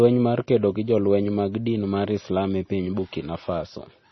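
Throughout the speech, everything above 5.9 kHz is missing and the sound is watery and swirly, with smeared consonant onsets. The likely cause is heavy MP3 compression, fitting a bitrate near 24 kbps. A spectrogram shows a hard ceiling at 5.9 kHz and patchy, flickering gaps below it.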